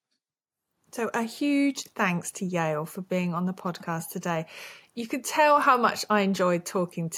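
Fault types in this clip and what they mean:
Nothing in this speech recording calls for a technical note; no faults turn up anywhere in it.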